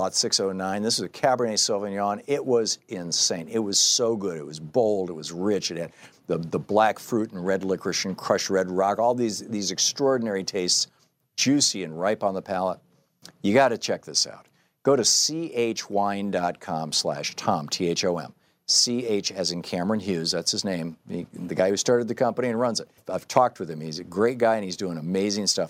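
Speech recording, with no technical faults heard anywhere.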